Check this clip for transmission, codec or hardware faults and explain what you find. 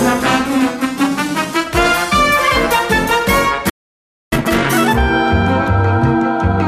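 Two faults are audible, a playback stall and a catch-up that follows it.

From 3.69 to 4.33 s there is a playback stall. The sound stops dead for about 0.62 s, likely because the player ran out of buffered data.

From 4.33 to 4.93 s comes time-compressed catch-up. The player drops and cross-fades small slices, so the sound runs at double speed, pitch unchanged.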